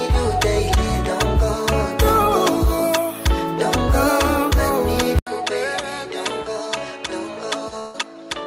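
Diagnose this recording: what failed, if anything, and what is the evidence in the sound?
From 5.19 s, after an 80 ms silence, the sound turns duller and roughly 10 dB quieter, with nothing above 11.4 kHz and a new noise floor about 40 dB down. This is likely an input switched to a poorer device at the driver stage.

Between 7.79 and 7.96 s the sound is stretched and fades for 144 ms, then jumps ahead with about 140 ms missing. This is a burst of packet loss on the network: the receiver extended and attenuated the last audio to cover the gap.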